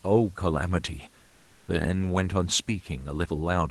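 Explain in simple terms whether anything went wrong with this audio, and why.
In a pause in speech the call likely stopped sending sound, so 1.27 to 1.67 s has comfort noise in place of the background: a flat hiss at a slightly different level.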